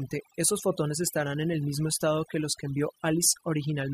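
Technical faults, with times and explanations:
Throughout, overdone noise removal: a noise reducer set too aggressively pulls individual frequency bands down whenever they sit near its noise estimate, taking quiet parts of the speech too, so pauses fall to near silence with twinkling specks. A spectrogram shows scattered isolated dots in the gaps and ragged, holed harmonics.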